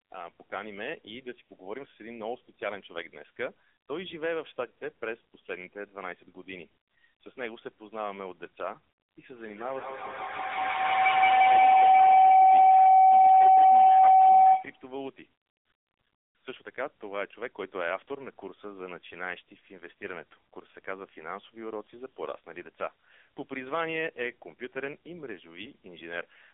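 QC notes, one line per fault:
throughout: AMR narrowband mobile codec. The speech is confined to a phone-line band of roughly 300 Hz to 3.6 kHz, with nothing above 3.8 kHz, and carries heavy buzzy, synthetic coloration, which fits a low AMR-NB mode around 6.7 kbps. The codec rebuilds each 20 ms frame from a vocal-tract model fed by a few pulses, so sparse bits leave a rasp. A plain telephone filter would narrow the band without this artificial buzz.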